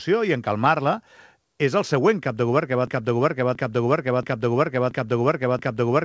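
At 2.87 s the sound locks into a broken-record loop. A fragment of about 0.68 s repeats exactly, back to back, until the clip ends, and whatever should have followed is lost. The likely cause is a stall in the player, encoder or stream, which kept resending the last piece it held. On a waveform the identical blocks tile at a steady 0.68 s spacing, and a spectrogram shows the same pattern stamped over and over, all of it stopping at 8 kHz, as the call path passes nothing above that.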